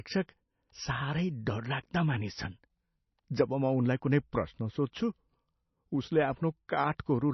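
A speech recording with heavy MP3 compression damage from start to finish. Nothing is present above 5.9 kHz, so the treble is cut off hard and the sound is dull. The damage points to a very low bitrate, about 28 kbps. The encoder likely ran short of bits and dropped weak frequency lines. Those lines switch on and off between frames. That gives the sound a watery, swirling texture, and consonant attacks smear.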